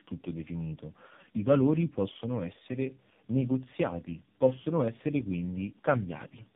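Tandem speech coding runs through the whole clip. The speech sounds like it has crossed several network borders, decoded and re-encoded at each, with three lossy speech coders in a row. The character fits a low-rate AMR-NB stage at the end, each coder working on the previous one's already damaged output. The result is rough, muffled and warbly speech with nothing above 3.7 kHz, and the degradation compounds beyond what a single codec would produce.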